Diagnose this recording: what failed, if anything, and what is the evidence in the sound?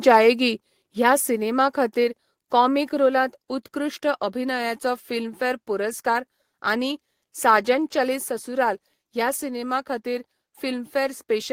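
The failure sits in call processing: the microphone volume stepped down twice, at 2.04 s by about 2 dB and at 8.16 s by about 3 dB. Both speech and background noise drop together in a single instant, with no fade. On a waveform the envelope shrinks abruptly at each point, and a spectrogram shows the whole band, noise floor included, darkening evenly. The likely cause is automatic input-gain control lowering the device's capture volume.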